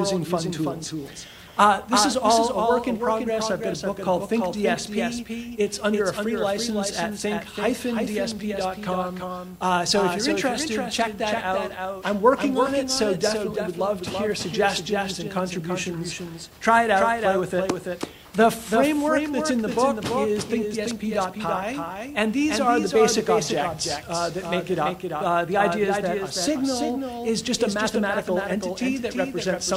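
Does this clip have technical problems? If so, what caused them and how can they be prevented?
Yes: a doubled audio track runs throughout, with a dry copy about 5 dB quieter trailing about a third of a second behind, likely from the signal being captured twice through a slower path. Monitor only one input route and mute duplicate sends or loopbacks before recording.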